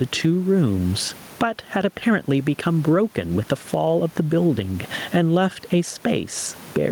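Gain pumping runs through the whole of this speech recording, a gain swing of roughly 15 dB. The likely cause is input gain set far too high, with a fast limiter or compressor hauling the level back on each loud syllable, so loud and quiet passages are squeezed together, and the room noise sits about 34 dB below the speech.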